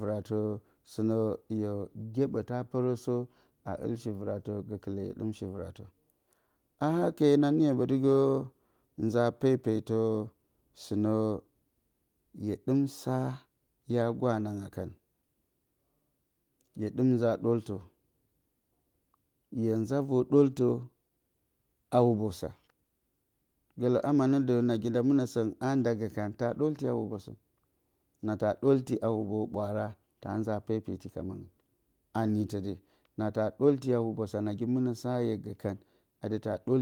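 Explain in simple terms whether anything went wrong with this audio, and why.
Nothing went wrong here: listening all the way through the speech, there are no technical problems to point to. The sound carries on without any breaks, jumps or sudden changes that would suggest something had failed.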